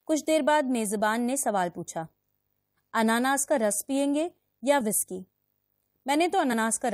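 A speech clip. From 0.0 to 1.5 s quiet passages sound gritty and grainy, with distortion that tracks the signal about 50 dB down, likely low bit depth without dither, roughly 10 bits rounded with no added noise. Around 4.79 to 4.81 s and again at 6.52 s there are brief jumps where the speech jumps forward by about 20 ms and then about 40 ms. These are compressed frames skipped, with missing or rejected frames dropped.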